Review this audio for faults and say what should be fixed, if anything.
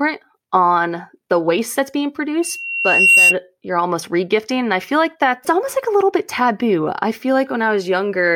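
Loudspeaker feedback squeal from 2.41 to 3.36 s: a 2.7 kHz tone swells over roughly 0.7 s to about 10 dB above the speech, as the microphone re-amplifies the loudspeaker. A spectrogram shows a bright horizontal line; the waveform envelope balloons. Reduce monitor gain, reposition the microphone, or notch 2.7 kHz.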